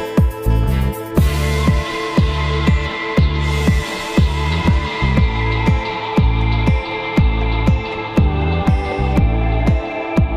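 Nothing in the audio stood out as a technical problem on listening.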